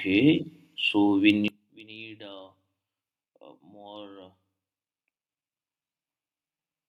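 One channel inverted from 1.48 s to the end: when summed to mono the speech drops by about 22 dB, leaving a faint remnant. This is likely because one stereo channel has flipped polarity, so the centred content common to both cancels out.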